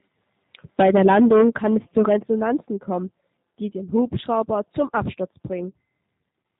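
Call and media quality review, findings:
G.729 codec, throughout: band-limited, slightly rough, synthetic timbre, plainly audible. Decoder rebuilds speech from a vocal tract filter, pitch predictor and sparse pulses, consistent with 8 kbit/s G.729A. Spectrogram shows a hard ceiling at 4 kHz, with blurred harmonic detail below it.

VoIP packet loss concealed by the speech codec, 5.70–5.74 s: a brief stretched buzzy tone or coloured noise fading out over about 40 ms, which fits two lost 20 ms packets. The decoder repeats the last pitch and filter at falling gain. In the waveform, near-identical pitch periods decay, then the signal returns weak or distorted for a short stretch.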